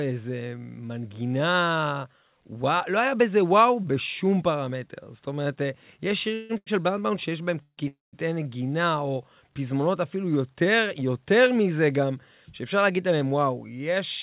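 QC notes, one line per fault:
6.34 to 6.51 s, 7.62 to 7.80 s and 7.88 to 8.15 s: call audio freeze, likely from packets held up in transit so the jitter buffer ran dry. The receiver carries the last sound on as a fading buzz or hiss for about 153, 151 and 252 ms. The first never reaches silence. The second and third die away into about 80 and 170 ms of silence. Playback then resumes where it stopped with nothing lost, so the gaps add delay. The decay into quiet is what separates these from a simple stall.
6.57 to 6.68 s: short stall from a late packet. One packet missed its slot and the jitter buffer emptied, so the last sound is held for about 91 ms until it arrived. Playback then picks up at the same point with nothing missing. The stall is heard as a single sound held too long with a buzz or dip, not as a fade to silence. It is shorter than the freezes, and a 4 kHz band limit from the A-law call codec is audible around it.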